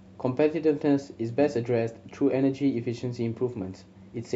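A short speech recording with nothing technically wrong with it.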